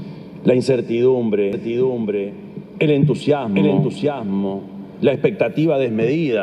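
From 1.53 s to 5.15 s the audio carries a doubled audio track: a second, full-band copy trails the original by roughly 0.7 s, about 5 dB quieter, with no decay or room colour, and it cuts in and out abruptly at those times. The likely cause is a second capture through a slower path. On a spectrogram, every pattern reappears shifted right by the same gap. The waveform thickens sharply where the copy starts and thins sharply where it stops.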